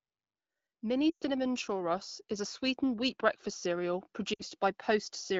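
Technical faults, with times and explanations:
0.8–5.17 s, automatic gain rising: the level climbs steadily by about 8 dB as the gain control, judging the input too quiet, keeps turning itself up. Speech and the background noise floor swell together, so the room seems to come closer rather than the talker getting louder. On a waveform the envelope widens slowly across these four seconds. On a spectrogram the whole picture, including the quiet gaps between phrases, brightens gradually from left to right.
1.10–1.25 s and 4.33–4.43 s, lost AMR speech frames: corrupted frames were discarded, and the wideband decoder filled the holes by repeating the last good pitch and vocal tract settings while lowering the gain. The first gap of about 120 ms fits six 20 ms frames. It sounds like a smeared, buzzy hold that quickly dies to near silence, then speech comes back thin and rough. The second, about 60 ms, or three frames, is a shorter warble and dip. 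On a spectrogram each shows flat, unchanging harmonic bands fading out, with a sharp edge where real speech resumes.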